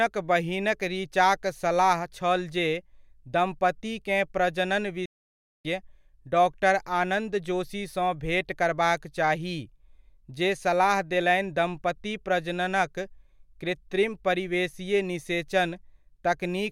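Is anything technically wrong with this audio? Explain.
Yes, there's a playback stall. At about 5.06 s the speech just cuts out to silence and stays gone until roughly 5.65 s, so close to 0.59 s of dead air, before picking up again. It sounds like the player ran dry or its thread got held up: with nothing arriving to render, the output simply goes quiet until data flows again. That's the likely cause, and it's why the gap lands mid-flow rather than at a natural pause.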